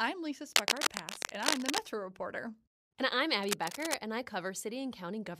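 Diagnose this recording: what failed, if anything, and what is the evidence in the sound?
Cable scratch noise, likely in the analogue wiring. Dense, uneven scratching covers the speech from 0.53 to 1.80 s, louder than the speech. A softer burst runs from 3.43 to 3.95 s, ending before "and I". A worn contact, when moved, shifts resistance rapidly.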